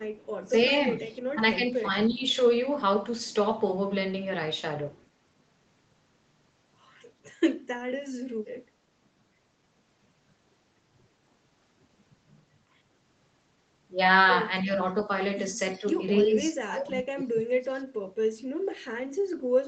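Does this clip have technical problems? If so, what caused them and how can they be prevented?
Yes. From 0.01 to 0.49 s a very faint, delayed copy of the voice trails behind the talker by about 312 ms, sitting well below the main speech. This is an echo leak, likely caused by the far end playing the call on a loudspeaker while its echo canceller let part of that playback slip back into its microphone and return down the line. Using a headset at the far end, or giving its canceller a cleaner, correctly aligned reference signal, would prevent it.

The talker's level also sags in two places. From 0.45 to 2.25 s, parts of the voice, roughly half a second in total, dip by about 10 dB. From 16.25 to 17.99 s the dropouts are far deeper, around 30 dB, covering about a second and a half, so the voice nearly vanishes in pieces. This is speech suppressed in double talk: while both sides were speaking, the echo canceller likely could not tell the local talker from loudspeaker echo and turned everything down. 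A canceller with better double-talk detection, or headsets on both ends, would prevent it.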